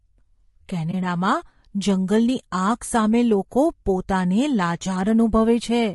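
Throughout, the speech sounds rough and grainy, likely from low-delay AAC compression at a low bitrate; a spectrogram shows noise filling the gaps between harmonics.

From 0.91 to 0.94 s, AAC frame loss with muting opens a brief dip: the waveform tapers down and back, fitting one lost frame.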